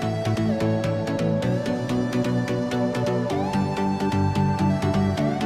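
Nothing stood out on listening; no technical faults could be heard at any point in the audio.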